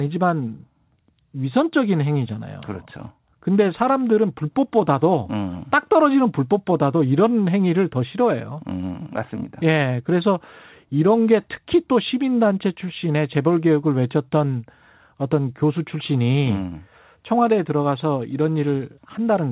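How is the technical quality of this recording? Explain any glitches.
The technical quality of this recording holds up with no glitches to explain, the speech coming through a G.711 call path that leaves nothing above 4 kHz.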